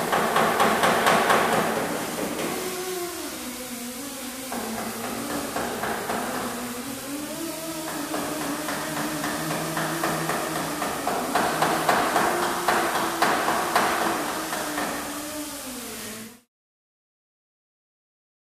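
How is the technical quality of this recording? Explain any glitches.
Nothing glitchy turns up here, and the only shift in level is a gentle smooth fade out that starts around 16 s and wraps up by 16.49 s, the way an editor would close off a clip.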